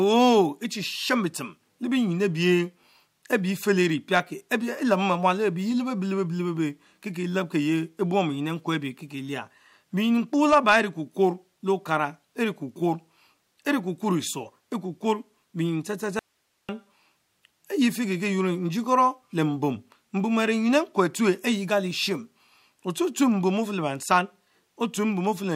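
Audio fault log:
16.19–16.69 s: audio dropout to a faint residue, speech cuts abruptly for about 0.5 s leaving only hiss roughly 50 dB down, likely a lost signal feed with the downstream path still live.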